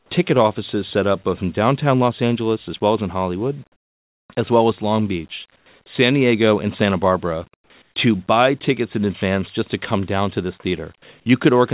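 From 0.0 to 0.1 s, 3.72 to 4.28 s (just before "as well as"), 5.56 to 5.66 s, 7.54 to 7.7 s and 7.82 to 7.96 s (both just before "to buy tickets in"), the pauses lose their real background. Each carries a steady, featureless hiss about 5 to 13 dB quieter, likely comfort noise in place of the background from discontinuous transmission. The original ambience returns when the sound resumes. Throughout, nothing is heard above 4 kHz, which fits a G.711 call path.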